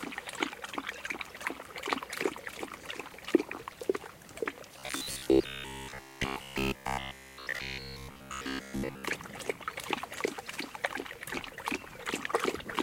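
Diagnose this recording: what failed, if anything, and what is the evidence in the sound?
From 4.79 to 9.04 s the sound becomes a rigid 66.8 Hz buzz: robotic sound from repeated short buffers, likely underruns looping roughly 15 ms chunks.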